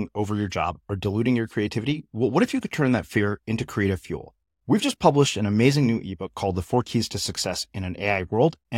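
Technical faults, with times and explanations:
No technical faults can be heard in this speech.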